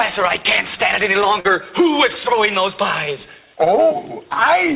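A short concealed packet loss hit this audio at 1.40 to 1.47 s: about 40 ms of data missed the decoder, which filled roughly 43 ms by extending the preceding sound and then crossfading back, heard as a brief smear or wobble. The call path's hard band limit at 4 kHz and its grainy coding noise point to G.711 mu-law at 64 kbps.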